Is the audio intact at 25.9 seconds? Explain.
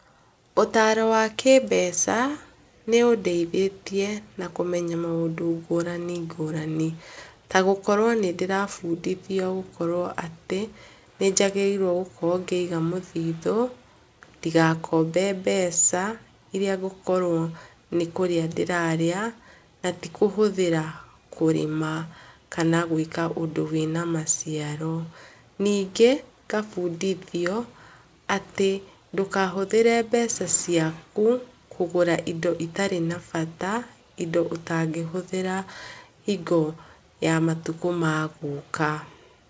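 Yes, the speech at 25.9 seconds is intact, with nothing there beyond the call path's normal band limit, which leaves no content above 8 kHz.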